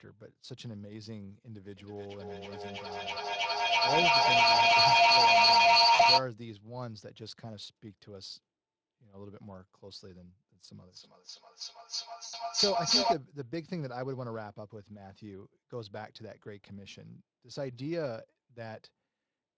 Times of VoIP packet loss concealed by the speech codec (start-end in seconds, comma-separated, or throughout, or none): 5.95-6.01, 12.25-12.35